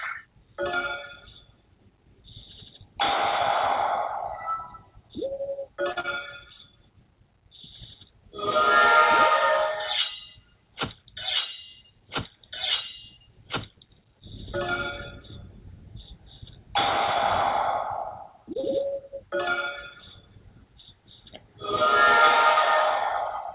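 A short stall from a late packet comes first, at 5.92 to 5.98 s. A packet missed its playout time, the jitter buffer ran dry, and the receiver held the last sound for 41 ms before resuming at the same point. Nothing is lost, but the sound hangs unnaturally with a slight buzz or dip, and everything after it arrives 41 ms later. The same thing recurs more briefly at 18.53 to 18.57 s, a 16 ms hold.

Short concealed packet loss follows each stall. At 6.00 to 6.06 s, 40 ms of audio never reached the decoder, and 36 ms of synthesised continuation covers the hole before blending back, heard as a quick smear or wobble. At 18.61 to 18.76 s, 20 ms goes missing and 22 ms is filled, adding a few milliseconds of extra delay. Both sit on the call path's narrow band, with nothing above 4 kHz, which fits G.711 A-law at 64 kbps.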